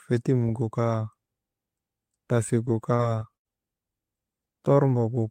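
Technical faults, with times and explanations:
2.65–3.47 s, repeated packet loss (robotic sound): four gaps in the stream, the longest 79 ms, each patched by stretching the preceding speech, 151 ms filled in all. About a fifth of this stretch is concealment, so the speech turns choppy, with fragments missing.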